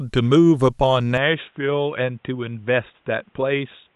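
Input switched to a poorer device at 1.18 s, running to the end: the speech abruptly turns dull and boxy, with nothing above 3.8 kHz, drops a few decibels in level and gains a faint new noise floor, with no gap, likely from a change of microphone or headset profile.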